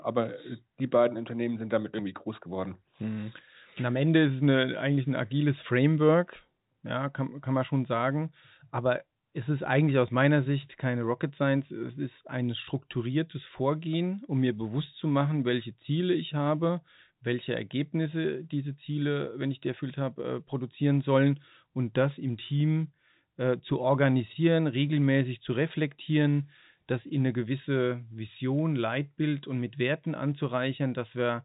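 Nothing is technically wrong with this speech clip; it has the narrow band of G.711 telephone coding, with nothing above 3.8 kHz.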